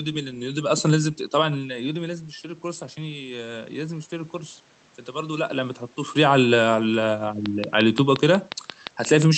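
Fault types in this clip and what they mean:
Automatic gain rising: The input dropped about 10 dB, so the gain control slowly raised its level about 3 dB. Speech and room noise swell together from 1.56 to 4.4 s.
Train of clicks: Regular, similar clicks tick about 5.7 times a second from 7.46 s to the end, well above the speech. The likely cause is interference or a faulty connection or power supply.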